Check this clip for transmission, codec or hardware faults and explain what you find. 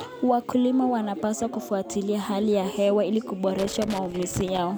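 Loose connector crackle. It runs from 3.58 to 4.58 s, starting right after "hali ya hewa ili". A worn or dirty contact in the cable or jack is moving. It makes and breaks the circuit many times in quick succession. Each break chops the signal, and any DC on the line turns the jumps into pops. The result is an irregular burst of crackle and scratching laid over the speech for about a second.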